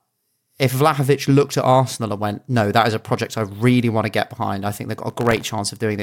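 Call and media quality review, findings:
Processor overload crackle, 5.10–5.54 s: gritty tearing over the speech. Probable component is the audio processing thread missing deadlines. Buffers of under a millisecond drop to silence a few dozen times across the stretch, then it clears.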